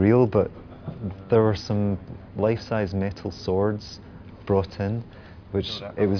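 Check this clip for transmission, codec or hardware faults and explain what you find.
No faults turn up in this clip. There is nothing here that needs further explanation.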